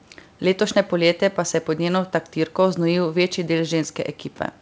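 Nothing stood out on listening to this speech recording.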